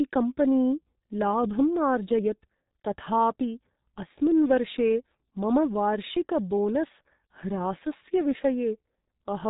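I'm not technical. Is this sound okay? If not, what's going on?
No. From start to finish, the speech has passed through the G.723.1 codec, an early internet-phone format that squeezes audio very hard. Nothing above about 3.8 kHz survives, so the voice sounds muffled. The codec's model of the voice also updates slowly, which makes the speech hoarse and blurs consonants. That rough, smeared texture is what separates it from simple muffling, where the sound is dull but still clean.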